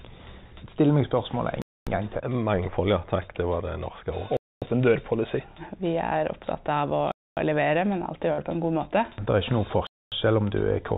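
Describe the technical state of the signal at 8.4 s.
At 8.4 s the signal is inside a burst of packet loss running from 8.33 to 8.44 s. The receiver had no data for this stretch, so it concealed the gap by extending the last received sound for about 46 ms, fading it out, in place of about 40 ms of missing audio. When playback resumes, roughly 14 ms of the original audio has been skipped. The result is a brief smeared, decaying tail, then a slightly jumped restart, all within the 4 kHz band of the G.711 A-law call path.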